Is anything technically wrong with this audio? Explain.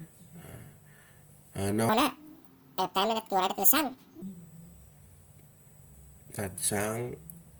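Yes, two faults are audible in this speech clip.

USB whine runs through the whole recording as a steady, fixed-pitch tone at 8 kHz, strongest at its harmonic at 16 kHz, sitting roughly 35 dB below the speech. The 8 kHz spacing matches the 125-microsecond microframe rhythm of a USB bus: the current the bus draws in those bursts leaks into the audio through the power supply or ground, leaving a constant high whine under everything.

A section at the wrong speed runs from 1.89 s to 4.22 s, where the audio plays 1.8 times too fast. Speed and pitch jump together at the start of the section and drop back together at its end, so the speech there turns hurried and chipmunk-like, raised by around ten semitones. This is likely caused by that stretch being played or edited against the wrong clock rate, so its samples were read out faster than they were captured.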